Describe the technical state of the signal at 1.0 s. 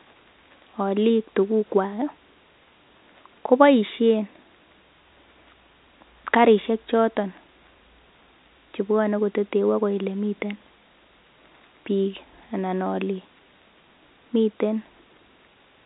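At 1.0 s the speech is intact, with no fault present, and it carries the narrow band of G.711 telephone coding, with nothing heard above 3.8 kHz.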